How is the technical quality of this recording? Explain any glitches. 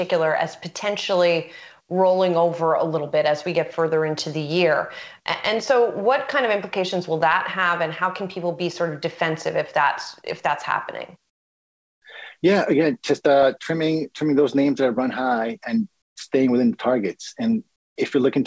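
The recording carries the marks of a wideband call path, with nothing above 8 kHz, and three brief gaps where the background is replaced.

Comfort noise in place of the background, at 11.30–12.02 s, 16.02–16.16 s and 17.76–17.96 s: the real room tone, already about 55 dB below the loudest sound, gives way to flat, featureless hiss roughly 20–26 dB quieter. This is likely discontinuous transmission, with the receiver synthesising noise while the sender pauses.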